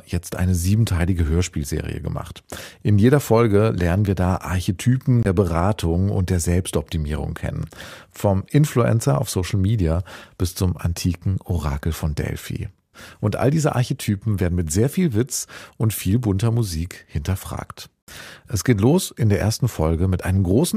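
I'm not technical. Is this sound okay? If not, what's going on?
No. The sound drops out twice, briefly falling silent at 5.23 s for about 22 ms and at 18.02 s for about 49 ms before picking up again. These gaps are a Bluetooth stall, likely caused by wireless interference delaying data until the headphones ran out of audio to play.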